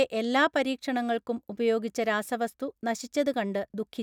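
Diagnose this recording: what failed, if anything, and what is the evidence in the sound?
Nothing failed at any stage: the speech signal arrives continuous and intact, with no interruptions, distortion, level jumps or timing errors anywhere in the recording.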